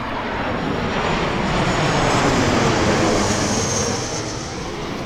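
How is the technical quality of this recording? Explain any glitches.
No glitches are audible in this recording, so there is nothing to explain.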